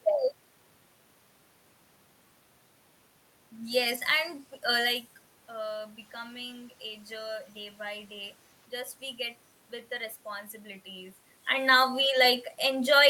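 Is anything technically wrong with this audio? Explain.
No, nothing technical stood out on listening, since the room noise belongs to the recording space and the shifts in speech level around 5 s and again near 11 s sound like the talker moving relative to the microphone.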